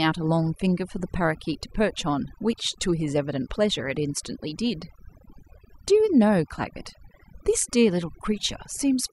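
Overdone noise removal runs through the whole speech clip. A noise reduction stage was set too aggressively. It cut individual frequency bands near its noise estimate, taking quieter parts of the voice too. The background drops and breaks up into twinkling specks.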